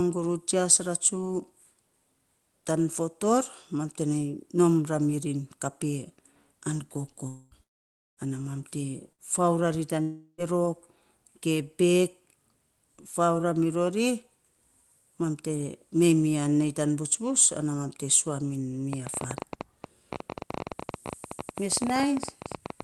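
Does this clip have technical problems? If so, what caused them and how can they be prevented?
Yes. Long network dropouts, likely from lost packets, occur at 7.27–7.54 s, 7.63–8.20 s before "ana mam te fau", and 10.02–10.41 s after "fau ra tan ri". Concealment fades, then silence. A wired connection or a larger jitter buffer prevents these.

A burst of packet loss between "ana mam te" and "fau ra tan ri" (9.13–9.21 s) drops about 60 ms, concealed by continuing the last sound and fading it. Forward error correction reduces these.

A train of clicks from 18.93 s to the end ticks irregularly about 15 times per second, well above the speech, likely from interference or a faulty connection or power supply. Moving nearby equipment away or checking cables and the power supply prevents it.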